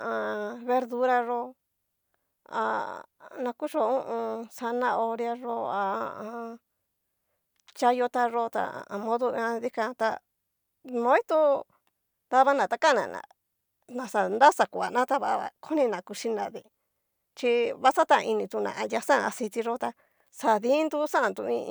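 Nothing technically wrong turns up anywhere in this speech recording, so there's no time or cause to point to.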